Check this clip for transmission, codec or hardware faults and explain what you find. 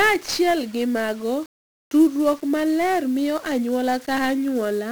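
There's one fault, and it runs through the whole speech clip: 1-bit DFPWM compression. Each sample is a single bit nudging an adaptive level up or down, so heavy broadband quantisation noise rides everything, making it fuzzy and crackly with the treble buried under hiss, which fits a bitrate around 48 kbps.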